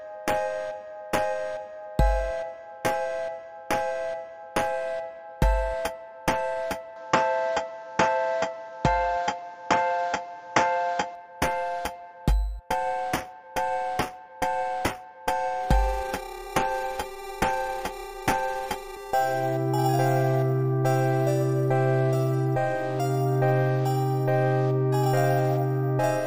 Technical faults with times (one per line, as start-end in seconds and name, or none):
6.96-11.15 input switched to a poorer device